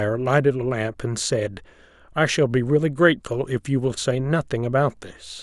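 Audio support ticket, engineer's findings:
Engineer's findings: no faults found in the speech audio on this ticket.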